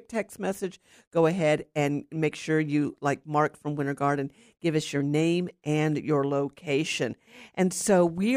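No technical faults can be heard anywhere here.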